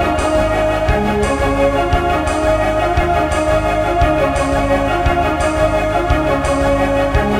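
A music clip with no technical faults to report.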